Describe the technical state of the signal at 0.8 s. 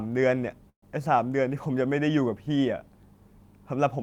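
At 0.8 s the signal sits inside a call audio freeze from 0.69 to 0.84 s, likely from delayed packets draining the jitter buffer. The last sound stretches into a fading buzz, then about 80 ms of silence, before resuming intact but 130 ms late. On a spectrogram this appears as a smeared, flat-textured band followed by an empty gap.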